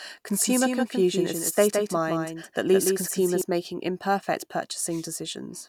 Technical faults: doubled audio track

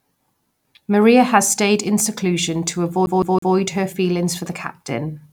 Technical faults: CD stuck on one turn

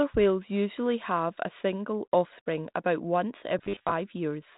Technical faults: robotic sound from repeated short buffers

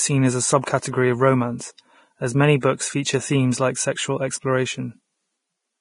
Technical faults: Vorbis compression; pre-echo

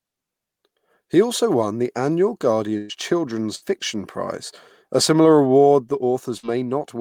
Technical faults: burst of packet loss

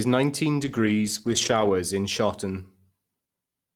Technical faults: call bitrate drop

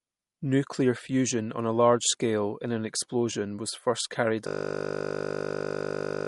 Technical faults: MP3 compression; system hang loop

